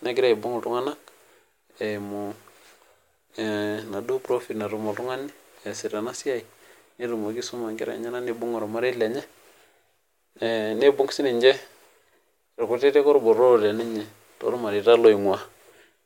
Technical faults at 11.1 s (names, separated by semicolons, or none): none